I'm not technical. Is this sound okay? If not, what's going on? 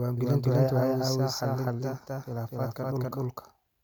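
No, there's a doubled audio track running the whole way through: every bit of speech comes back about a third of a second later, just as loud, like a flat echo. Most likely the recording got captured twice, one copy lagging behind.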